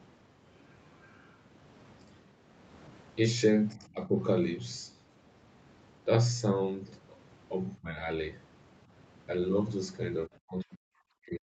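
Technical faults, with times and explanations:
1.01 to 1.37 s, other side's voice leaking through: A second voice sits faintly under the speech, roughly 35 dB down. It is likely far-end audio from a loudspeaker that the echo canceller failed to fully remove from the microphone.
3.74 to 4.11 s, 7.80 to 8.06 s and 10.26 s to the end, speech suppressed in double talk: The talker's level drops, by about 10 dB, then about 15 dB, then about 40 dB in the last stretch. The first two dips each last about a fifth of a second. The likely cause is an echo canceller that could not separate the talker from simultaneous far-end echo, so it turned both down.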